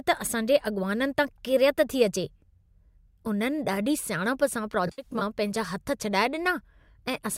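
AAC frame loss with concealment, 4.87–5.22 s: about 150 ms of frames vanish in short bursts, patched from earlier spectra, leaving smeared, phasey speech.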